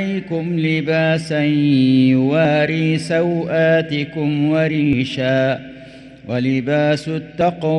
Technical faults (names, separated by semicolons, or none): audio missing between chunks